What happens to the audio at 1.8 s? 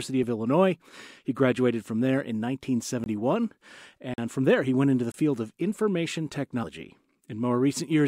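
At 1.8 s the audio is intact, with no dropout, click, distortion or other fault at that point.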